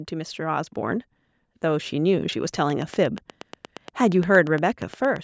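From 0.1 to 1.09 s, the level climbs by about 4 dB. This is automatic gain rising. The gain control judged the input too quiet and raised its gain step by step. The voice and the background swell together over that second.

From 2.7 to 5.17 s, a train of clicks runs over the speech. About twenty sharp ticks arrive at a steady 8.5 per second, each much the same shape. They stand well above the voice and carry on through pauses. Interference from nearby equipment or a faulty connection is the likely cause.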